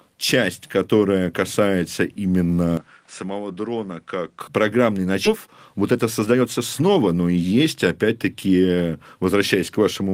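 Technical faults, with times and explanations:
2.77–4.41 s, input switched to a poorer device: The sound abruptly loses everything above 10.4 kHz and drops about 10 dB, with a new noise floor about 40 dB down. No silence marks the change. A switch to another microphone is the likely cause.
5.25–5.27 s, skip ahead: Playback jumps forward with no filler. Roughly a second of audio is simply gone, and the two sides are butted together. Later audio was already waiting, so the delay shrank by about that much at once.
5.47–7.65 s, jitter buffer speed-up: The audio runs at 115% speed while pitch stays unchanged, so it sounds hurried. The receiver repeatedly cut tiny pitch-period slices, roughly 300 ms in total, to drain an overfull buffer.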